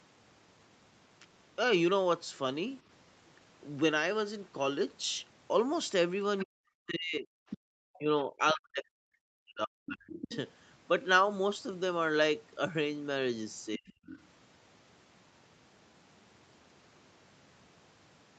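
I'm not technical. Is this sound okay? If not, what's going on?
No, there are a few problems, all from the echo canceller on the talker's end.

Other side's voice leaking through: you can hear faint scraps of a second voice at 6.40 to 6.44, 7.50 to 7.58, 10.21 to 10.36 and 13.88 to 14.19 seconds. The likely cause is the far caller playing on the talker's loudspeaker and getting back into the mic without being fully cleaned out.

Speech suppressed in double talk: from 6.44 to 7.3, 7.95 to 10.31 and 13.77 to 14.14 seconds, the talker's voice sinks, goes dull or breaks up, almost vanishing at times. This likely happened because both people spoke at once and the canceller turned everything down.

Background gated by the echo canceller: at 7.58 to 7.67 seconds, right after one of those leaks, the room sound drops out very sharply for about a tenth of a second. The canceller clamped the mic while the loudspeaker played, then let go again.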